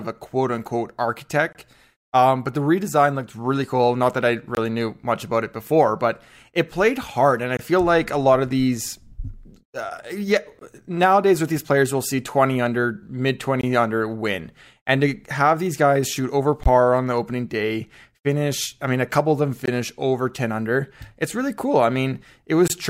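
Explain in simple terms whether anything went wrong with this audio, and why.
The speech keeps dropping out for an instant, a tiny hard-edged hole about 21 ms long every 3 seconds: at 1.53, 4.55, 7.57, 10.59, 13.61, 16.63, 19.66 and 22.68 s, the first right after "a quote unquote". This is a gap between chunks, where silence sits between 3-second blocks.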